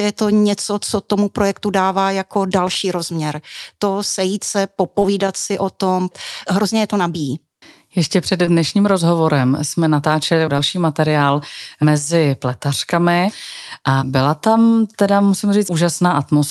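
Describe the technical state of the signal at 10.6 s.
At 10.6 s the signal is at the tail of a short concealed packet loss spanning 10.57 to 10.60 s. About 20 ms of audio failed to arrive in time, so the receiver extrapolated from the preceding sound, continuing its pitch or shaped noise, before crossfading back into real audio. The result is a brief smear or wobble in the speech, heard through the call codec's band limit near 12 kHz.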